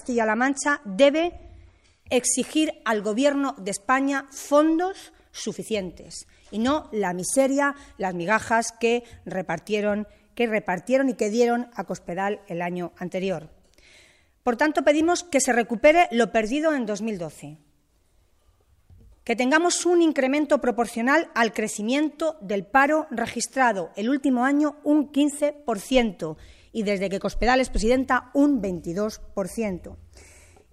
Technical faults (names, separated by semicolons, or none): adaptive stream starting at a low bitrate